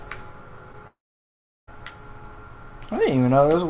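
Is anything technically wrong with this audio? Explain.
Yes, there are two faults, both in the first couple of seconds. The audio comes through a narrowband call path with nothing above 4 kHz, which fits a G.711 A-law codec.

Short concealed packet loss, from 0.72 to 0.75 s: about 20 ms of audio never reached the decoder in time, so the receiver bridged the gap by stretching the last bit of sound it had, shaped to its pitch or as noise, then crossfaded back into the real signal. You hear it as a quick little smear or wobble rather than a clean gap.

Long network dropout, from 0.87 to 1.69 s: roughly 800 ms is simply gone. At the start of the gap you get a short stretch of continued sound, a fading buzz or hiss, and then about 720 ms of silence or low steady noise before the audio picks up again later on, with the missing portion never played. That pattern is likely a network outage, with the receiver's concealment running out and giving up.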